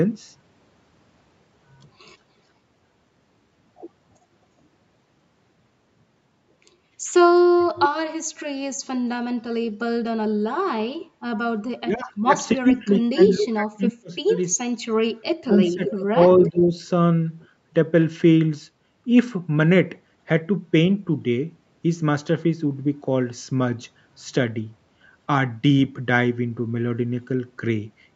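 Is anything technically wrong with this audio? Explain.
Yes. The recording has three related problems from the echo-cancelling stage of a call.

Echo leak: from 7.59 to 8.41 s, 11.0 to 11.06 s, 15.85 to 16.5 s and 17.41 to 17.46 s, a delayed copy of the speech comes back about 0.35 s behind the original. The likely cause is a loudspeaker on the far end whose echo canceller failed to remove everything its microphone picked up and sent the remainder back. The first and third leaks sit roughly 10 dB under the direct speech. The second is fainter, and the last is barely there.

Background gated by the echo canceller: from 11.09 to 11.27 s, the canceller clamped down on the microphone while the loudspeaker was active. The room sound drops by as much as about 22 dB for around 150 ms. It leaves a brief hole in the background that fills back in once the canceller releases.

Speech suppressed in double talk: from 11.79 to 14.31 s and again from 15.41 to 16.78 s, both sides seem to be talking at once. 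The likely cause is the canceller failing to separate the local talker from the loudspeaker echo and attenuating both. The speech dips, dulls and breaks up, at worst by more than 30 dB. About two seconds of the first stretch are affected and under a second of the second.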